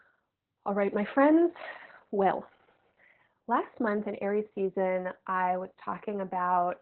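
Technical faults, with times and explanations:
Throughout: Opus voice compression. The speech is squeezed to what sounds like about 8 kbps, with the SILK coder in narrowband. Everything above 4 kHz is discarded and the excitation is coded coarsely, so the voice comes out heavily muffled, hoarse and somewhat robotic.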